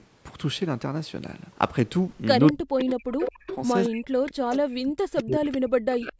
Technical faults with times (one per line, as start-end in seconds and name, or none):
2.47-4.57 echo leak
2.52-6.19 speech suppressed in double talk
5.52-5.57 echo leak